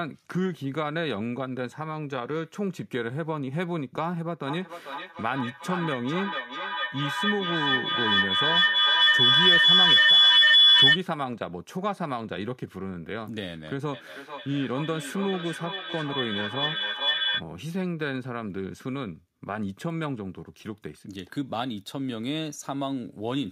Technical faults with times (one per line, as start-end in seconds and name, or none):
4.47-11.02 feedback howl
13.93-17.45 feedback howl